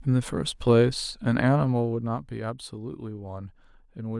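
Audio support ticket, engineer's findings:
Zipper noise, 1.59 to 2.40 s. Fine ticking rides on the speech while the level drops by about 10 dB. Probable gain stage stepping the level per buffer without smoothing, at roughly 100 steps a second. On the waveform, a staircase envelope instead of a smooth slope. On the spectrogram, faint, evenly spaced vertical broadband lines across that span, one at each step.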